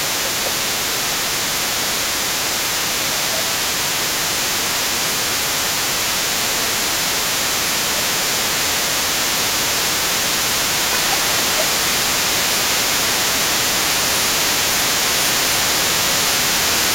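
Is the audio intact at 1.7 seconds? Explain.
No. Speech suppressed in double talk runs from 1.56 to 2.44 s. With both sides talking at once, the echo canceller likely couldn't separate the talker from the loudspeaker echo and turned everything down. The speech dips by around 10 dB, in pieces totalling roughly 0.7 s.

The other side's voice is also leaking through at this moment, as it does for the whole clip, at about 10 dB below the talker. Residual loudspeaker sound picked up by the microphone likely wasn't fully cancelled, so a second voice stays audible underneath.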